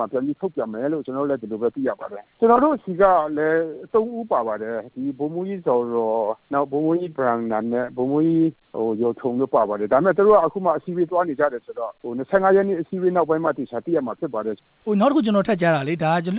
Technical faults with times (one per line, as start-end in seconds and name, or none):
none